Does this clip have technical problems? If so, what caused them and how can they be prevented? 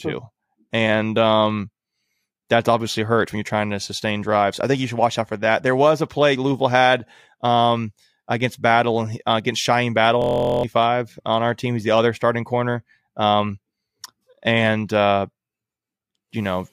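Yes. From 10.22 to 10.64 s the speech turns into a steady 43 Hz buzz: a system hang loop, replaying one 23.2 ms buffer (fitting 1024 samples) about 0.4 s. Prevent it by keeping audio drivers updated and the host stable under load.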